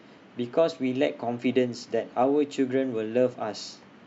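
A short piece of speech with nothing technically wrong to hear anywhere in it.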